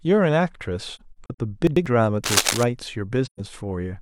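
From 0.95 to 1.39 s the speech breaks into short soft holes, about 170 ms of silence scattered over roughly 430 ms, with no gap longer than around 40 ms. This is AAC frame loss with muting, consistent with four lost frames whose spectrum was zeroed. The overlapping windows fade each hole in and out, so the gaps have rounded edges.

Between 1.67 and 1.86 s, the chunks are out of order. A segment of about 93 ms plays one chunk late, after the audio that should follow it. Nothing is missing, but the sequence is jumbled at hard joins, unlike the smooth fades of the muted frames.

From 2.24 to 2.63 s, dense, irregular scratching and rustling sits about as loud as the speech. This is cable scratch noise, likely from a worn cable or connector being moved. It adds noise over the speech rather than removing or reordering any of it.

At 3.26 to 3.40 s a second AAC frame loss with muting leaves a soft-edged hole of about 128 ms, which fits three lost frames. 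Like the first, it fades out and in.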